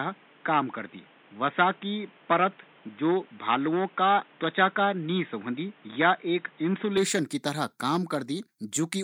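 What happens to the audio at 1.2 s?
At 1.2 s the speech is band-limited and boxy, with nothing above 3.8 kHz and a new noise floor roughly 30 dB down, from 0.0 to 6.97 s; likely an input switched to a poorer device. The spectrogram shows a flat ceiling at 3.8 kHz, and the waveform shows no gap or level step.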